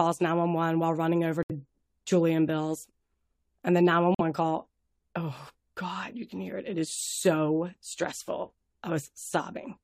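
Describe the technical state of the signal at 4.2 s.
At 4.2 s the signal sits inside a corrupt frame muted gap. Damaged compressed frames were rejected by the decoder and the player substituted silence, so the speech cuts abruptly to nothing from 4.15 to 4.21 s, a 60 ms hole that fits two lost frames, with the timing afterwards unchanged.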